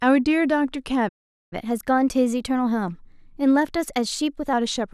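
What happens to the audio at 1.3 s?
That's a playback stall. The speech goes silent from 1.08 to 1.53 s, likely because the player ran out of data, then picks up again.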